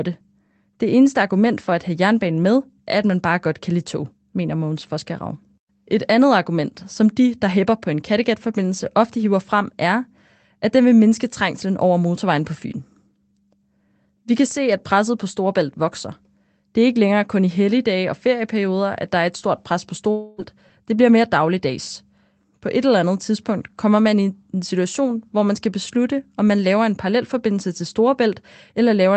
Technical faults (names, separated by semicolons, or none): long network dropout; lost packet rebuilt from error correction